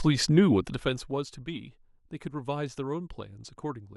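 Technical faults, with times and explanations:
0.39 to 1.37 s, zipper noise: a fine ticking buzz rides on the speech as it drops roughly 15 dB. The gain falls in unsmoothed steps, around two hundred a second, and each jump leaves a tiny click that fuses into a zipping texture.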